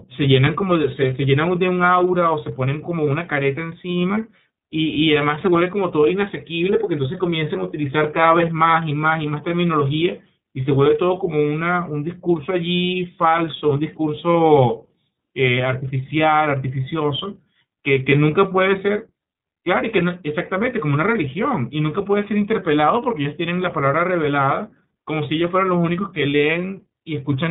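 Across the whole recording the speech carries iLBC codec damage, plainly audible as a rough, slightly synthetic edge. Each 30 ms frame's excitation is coded independently, which fits the 13.33 kbps mode. A spectrogram shows energy stopping sharply at 4 kHz, with grainy, smeared harmonics below.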